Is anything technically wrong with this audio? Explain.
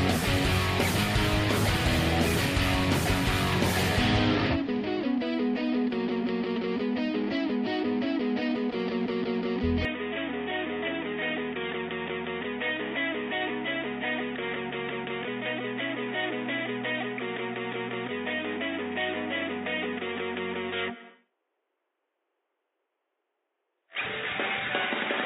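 Yes. From 9.85 s onward the sound abruptly turns dull, losing everything above 3.8 kHz, gets slightly quieter and picks up faint noise. The input likely switched to a poorer device.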